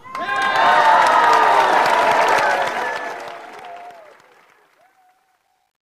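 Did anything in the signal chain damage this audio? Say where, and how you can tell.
Yes. From 2.36 s the fade-out turns gritty, worst from 3.89 s to 5.91 s: truncation distortion on a fade. A gain stage cut samples to roughly 11 bits without dither, leaving coarse square steps.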